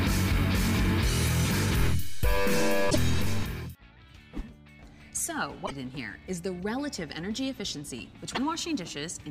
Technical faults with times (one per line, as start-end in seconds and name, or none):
1.80-3.43 DC step
2.87-2.96 damaged data in a compressed stream
5.65-5.72 damaged data in a compressed stream
8.32-8.38 damaged data in a compressed stream